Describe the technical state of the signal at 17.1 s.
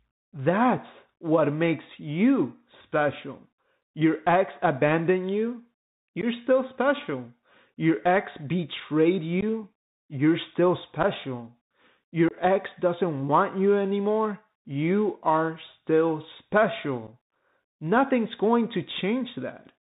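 At 17.07 to 17.09 s there is unconcealed Bluetooth headset packet loss: roughly one voice packet, about 7.5 ms of audio, is lost between headset and phone and is replaced by silence or an idle pattern rather than patched over. Unlike a gradual dropout, the hole has hard edges, and the sound returns briefly quieter.

Beneath it, the Bluetooth CVSD headset codec is plainly audible. One-bit up/down coding with an adapting step, which fits a 64 kbps CVSD link, leaves nothing above 4 kHz, scratchy s sounds and granular hiss. This differs from an ordinary low-pass filter, which would not add that hiss or slope distortion.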